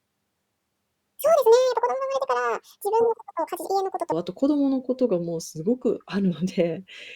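From 0 to 4.12 s, a section at the wrong speed runs 1.83 times too fast, likely from a mismatched clock, pushing the speech roughly ten semitones higher.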